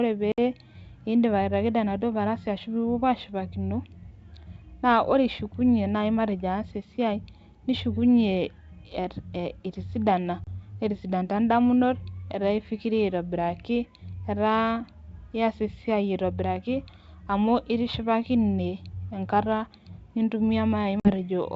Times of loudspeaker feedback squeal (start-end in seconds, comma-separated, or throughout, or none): none